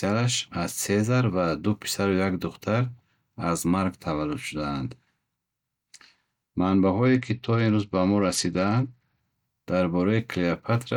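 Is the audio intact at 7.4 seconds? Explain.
No. From 7.06 to 9.20 s, which spans 7.4 s, the speech turns dull and gritty: the treble falls away and a rough, grainy noise rides on what remains. This is a Bluetooth SBC bit pool drop. On a congested link the sender cut the bits per frame, so the highest sub-bands got almost nothing and the lower ones were quantised coarsely. The degradation fits a bit pool falling from 31 to 11, near 83 kbps, until the rate recovered.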